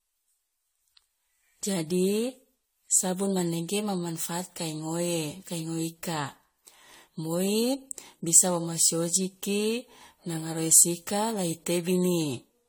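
Repeated lossy re-encoding, likely around five passes through an AAC-LC-type codec near 64 kbit/s, has left this speech clip with generation loss throughout: swirly, hollow, smeared sound with blurred attacks.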